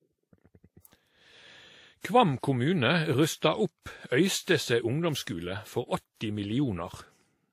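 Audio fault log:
throughout – transcoding between lossy codecs: The speech has nothing above 16.5 kHz, which shows on a spectrogram as a flat, hard ceiling across the whole clip. Below it sit two overlapping layers of artefacts from the two codecs, heard together. The cause is likely a re-encode, with a low-rate Vorbis file (around 45 kbit/s) re-compressed as WMA at about 64 kbit/s. The WMA encoder spent its bits preserving the earlier damage while adding its own.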